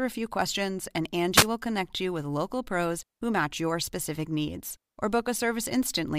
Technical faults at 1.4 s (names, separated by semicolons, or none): wireless microphone noise hit